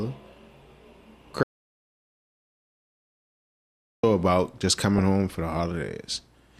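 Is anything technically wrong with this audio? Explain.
Yes, there are two problems here.

From 1.43 to 4.03 s there's an audio dropout to silence. About 2.6 s of speech just vanishes into silence with no room tone, likely from a lost input or link.

Then there's DAB burbling from 4.96 to 5.02 s. A few stray bit errors, around a tenth of a percent, got through into the MP2 data, fitting about four corrupted frames. That gives a brief few watery blips.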